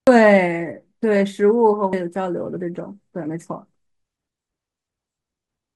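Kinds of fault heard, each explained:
Damaged data in a compressed stream: two brief corrupted stretches in the encoded speech, at 0.07 s and 1.93 s, each heard as a short glitch. At those points the decoder meets bytes it cannot interpret as a valid frame, so it outputs garbled samples or drops the frame while it hunts for the next sync header. Both glitches are momentary, and decoding recovers cleanly once a good frame is found.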